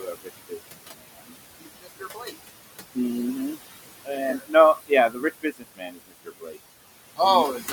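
Throughout, the background pumps down between phrases and swells under them: noise suppressor artifacts, the suppressor pulling the room noise, which sits about 11 dB below the speech, down by about 19 dB frame by frame. Speech cut by the noise suppressor comes at 0.00–0.76 s, 0.96–1.35 s, 1.60–2.35 s, 4.05–4.19 s, 4.38–4.55 s, 5.09–6.57 s and 7.57–7.72 s, where soft sounds turn faint or swallowed. The suppressor mistook parts of the speech for noise and cut them by up to about 22 dB, for roughly a second in the longest span.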